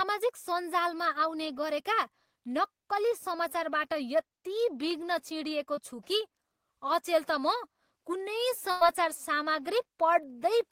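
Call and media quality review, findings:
Short concealed packet loss, 5.75 to 5.79 s. Brief smear in the speech. Network path and receiver concealment. About 20 ms never arrived in time. The decoder stretched the preceding sound over the hole, then blended back into real audio.

Burst of packet loss, 8.71 to 8.83 s. A held, fading tail, then the speech jumps ahead. Network path, with consecutive packets dropped or late. About 100 ms missing. The decoder extended the last sound and turned it down across the gap.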